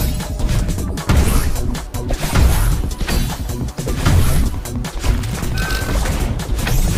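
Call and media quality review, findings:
Train of clicks, 4.01–5.85 s: regular ticking at about 9.3 per second, roughly twenty clicks, peaks about level with the sound, audible through pauses too. Same-shaped pulses at a steady rate, likely interference from nearby equipment or a struggling interface injecting them.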